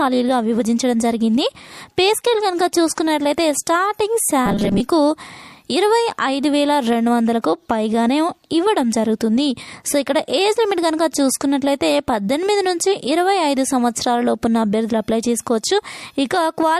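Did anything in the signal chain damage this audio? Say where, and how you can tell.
Yes. Pre-echo, a codec stage fault, appears at 2.95 s and 7.42 s. A hiss rises about 10 dB and about 14 dB over roughly 21 and 24 ms before each attack. This fits long transform blocks that never switch to short ones. On a spectrogram it shows as a broadband smear just before each vertical onset.

From 4.46 to 4.80 s the sound turns into a rigid, metallic 200 Hz buzz, which is robotic sound from repeated short buffers. A 5 ms stretch is repeated across most of that span, so the likely cause is a starved driver or buffer. The spectrogram shows a harmonic comb every 200 Hz, and the waveform shows near-identical repeating cycles.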